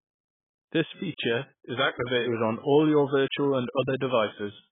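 Throughout, the speech sounds dull and smeared, with nothing above 3.8 kHz and a warbling texture on sibilants and held vowels. The likely cause is heavy AAC compression. The damage fits AAC-LC near 11 kbps, where the encoder drops the top band and quantises the rest coarsely.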